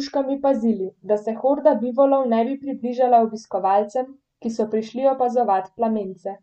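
No technical faults can be heard anywhere in the speech. Nothing in the recording calls for a time mark or a repair.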